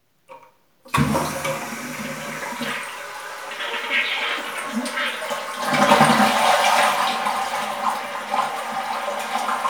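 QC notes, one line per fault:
No faults heard in this recording of sounds.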